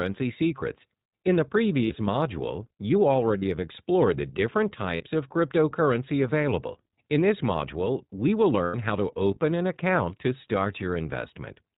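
The speech has been squeezed through the iLBC codec from start to finish. Its 20 ms frame structure fits the 15.2 kbps mode. The codec keeps nothing above 4 kHz and rebuilds each frame's excitation independently, so the voice comes out plainly dulled, narrowband and a little rough and synthetic throughout.

Lost iLBC frames then interrupt it four times. Each time, packets failed to arrive and the decoder filled the hole by repeating the last pitch cycle with added noise. At 1.84 s a 60 ms gap, fitting about three frames, turns into a brief held, buzzy vowel. At 3.38 s, after "module you", a 40 ms gap does the same before "have explored the different". At 4.96 s, before "of cryptocurrency available", another 40 ms gap gives a short breathy hold. The longest is at 8.64 s, a 100 ms loss between "this module we will" and "how to open an", where the repeated sound drones and fades. Because each frame stands alone, the voice snaps back cleanly right after every gap.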